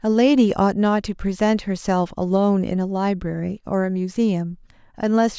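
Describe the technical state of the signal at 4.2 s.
At 4.2 s the speech signal is intact, with no audible technical fault at that moment.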